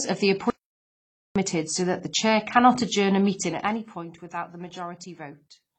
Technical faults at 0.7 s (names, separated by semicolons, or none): transcoding between lossy codecs; audio dropout to silence